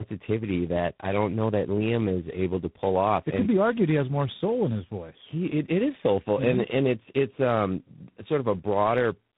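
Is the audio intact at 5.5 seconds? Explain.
No. Tandem speech coding affects the whole clip, 5.5 seconds included. The call seems to have crossed three speech coders in a row, likely CVSD, then a low-rate coder such as G.729A, then G.726, each decoding and re-encoding the previous one's already damaged output. The errors compound, so the speech at this point sounds rough, muffled and warbly, with nothing above 3.8 kHz.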